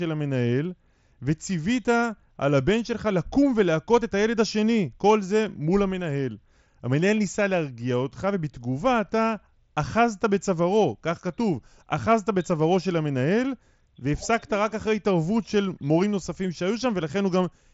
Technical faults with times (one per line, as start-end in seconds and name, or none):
none